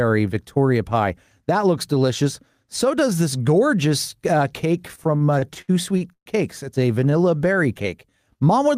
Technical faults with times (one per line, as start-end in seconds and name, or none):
4.81-6.29 repeated stalls (stutter)
7.00-8.49 jitter buffer slow-down